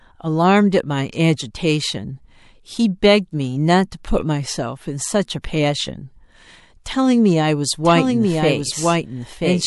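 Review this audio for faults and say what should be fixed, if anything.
Pre-echo shows up twice, from 5.42 to 5.44 s and again at 6.84 s: a short hiss about 14 to 15 dB up creeps in roughly 20 ms before a sharp attack and softens it. The codec is spreading the attack's quantisation noise back across a block of about 36 ms, and it never switches to shorter blocks. Turning on short-block or transient switching in the encoder, or giving it more bitrate, should clear this up.

From 7.84 s to the end there's a doubled audio track. A dry, full-band copy about 5 dB down trails the original by roughly a second, with no decay and an abrupt start. It's likely a second capture path or an edit layering in an offset copy. Muting the duplicate path, or removing the stray copy in the edit, should sort it out.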